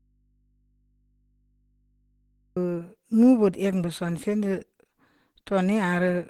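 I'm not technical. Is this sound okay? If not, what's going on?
No. From the start until 2.57 s there's an audio dropout to a faint residue: the speech is missing and only a low mains hum remains, likely because the input stayed live. A real pause would sound silent; this is hum.

Throughout, the speech sounds muffled, hoarse and grainy, most likely from heavy Opus compression. It is rough rather than the swirly, watery sound of heavily squeezed MP3.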